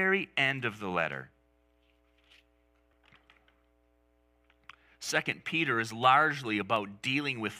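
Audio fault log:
0.51 s, 5.32 s, 6.76 s: dropped samples. A few samples were likely skipped in the stream each time, a fraction of a millisecond at most, so the waveform jumps straight from one value to a later one with nothing in between. That step is far too brief to remove any of the speech, so what you hear is a single sharp click at each point, seen as a thin vertical line across the spectrum.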